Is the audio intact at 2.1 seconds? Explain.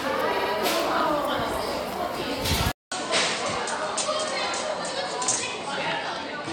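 Yes, the audio at 2.1 seconds is intact, with no dropout, click, distortion or other fault at that moment.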